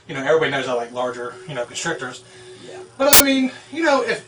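At 3.13 s, file tags were played as audio: a block of compressed data from an embedded cover picture was decoded as if it were samples. For about 75 ms until 3.20 s, this produces a very loud burst of white-noise static with abrupt, hard edges.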